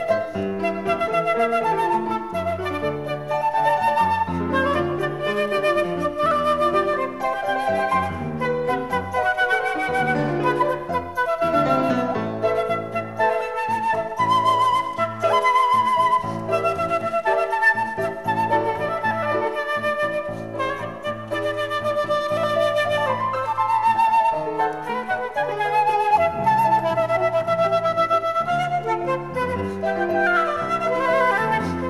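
No faults are audible anywhere in the recording.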